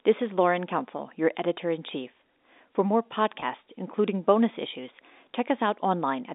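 At 3.40 to 3.42 s there is a brief packet loss with pitch repetition. About 20 ms of audio went missing, consistent with a single lost packet, and the receiver filled the hole by looping the last pitch period of the speech. It sounds like a tiny held, slightly buzzy catch rather than a dropout. On a waveform the gap shows as a few repeated cycles. On a spectrogram it shows as harmonics frozen flat for that instant, all inside the telephone band of the G.711 line.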